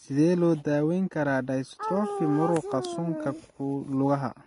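Throughout the speech, Vorbis compression likely explains the hissy, grainy treble, which ends abruptly above 10.6 kHz and is noisy rather than warbly like MP3 artefacts.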